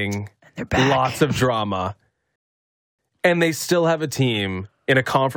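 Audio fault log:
2.36–2.99 s rebuffering stall: after "of drama" the speech stops dead for 0.63 s, then resumes exactly at "and they still have"; the player ran out of buffered audio and waited, adding time without losing any, seen as a flat waveform and blank spectrogram gap.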